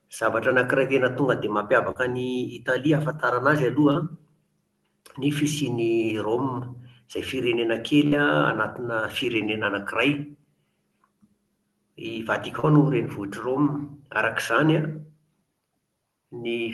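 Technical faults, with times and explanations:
1.91–1.98 s, 3.91–3.98 s and 12.60–12.66 s, short concealed packet loss: after "anankiray tena tonga dia", after "ahafantarana azy", and at 12.60 s, roughly 40 ms never arrived. The decoder extended the preceding sound for about 35–38 ms, then blended back, causing a brief smear. On a spectrogram, the sound runs unnaturally flat and smooth for that span.
8.07–8.15 s, burst of packet loss: consecutive packets dropped, leaving roughly 40 ms of audio missing. About 48 ms was filled by continuing the last sound at falling level, and then the audio resumes further on. The spectrogram shows a steady, fading band, and the waveform shows a tapering envelope before an abrupt restart.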